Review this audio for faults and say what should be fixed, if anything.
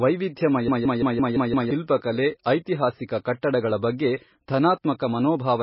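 From 0.68 to 1.71 s there's a system hang loop: one 171 ms chunk repeats six times, a stutter at about 5.9 per second, consistent with an 8192-sample buffer. Roughly a second of speech is lost. Keeping the audio thread from stalling, with a watchdog that mutes instead of replaying the buffer, would prevent this.

The whole clip has heavy watery, swirly damage and nothing above 5.5 kHz, likely from MP3 compression at a very low bitrate, around 18 kbps. Encoding at a much higher bitrate, or keeping a lossless master, would avoid it.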